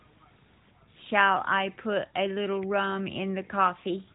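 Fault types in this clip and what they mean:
Nothing goes wrong anywhere in this speech clip, so there's no fault to list.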